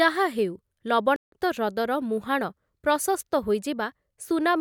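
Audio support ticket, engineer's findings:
Playback stall, 1.16 s to 1.32 s. Speech cuts to dead silence mid-flow for about 161 ms, then resumes. Likely cause: player-side underrun, with the output buffer drained before new data arrived or the audio thread blocked, so nothing was written to the device until it recovered. Check the decode/network feed and thread scheduling around that point.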